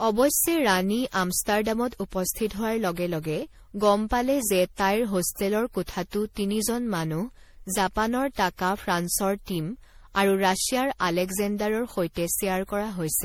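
Speech runs with generation loss across its whole length. It sounds swirly, smeared and hollow, and attacks blur. Nothing is heard above 18.5 kHz. The likely cause is around seven rounds of MP3 re-encoding, each adding fresh quantisation damage, at a rate fitting 64 kbit/s.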